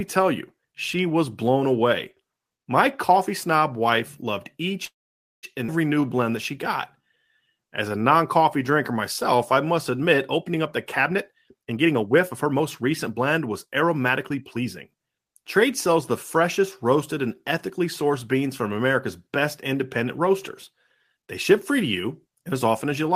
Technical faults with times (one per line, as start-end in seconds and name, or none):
4.85-5.45 call audio freeze
5.67-5.70 skip ahead
5.94-6.52 jitter buffer slow-down
6.96-10.56 jitter buffer slow-down
10.99-14.95 jitter buffer speed-up